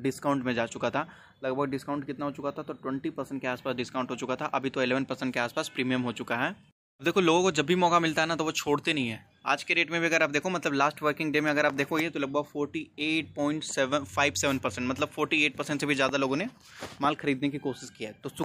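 Nothing in the signal points to a technical fault at any point in the audio.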